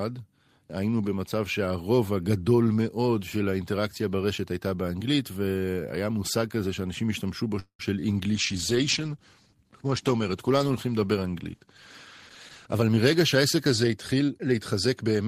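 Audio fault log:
7.59–7.81 s, call audio freeze: packets were likely delayed and the jitter buffer ran dry, so a 0.2 s fading fill ends in silence before the speech resumes intact.
8.36–15.27 s, call bitrate drop: the bandwidth estimate fell and the encoder went from 32 to 13 kbps, lowest for about 4.1 s, leaving speech coarse and muffled.
12.66–15.05 s, jitter buffer speed-up: the receiver cut short pitch-period pieces to shed surplus delay, around a fifth of a second, so speech runs 109% fast at unchanged pitch.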